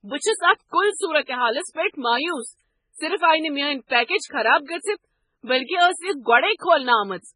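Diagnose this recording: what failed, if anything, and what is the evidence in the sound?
The codec stage is at fault, with MP3 compression the likely cause, and the damage is heavy across the whole speech clip. Nothing remains above 10.5 kHz, a hard treble ceiling, and the sound has a watery, swirling texture as weak frequency lines drop in and out from frame to frame. That fits a very low bitrate, around 16 kbps. A simple low-pass filter would dull the top end but leave the rest steady, without this warbling.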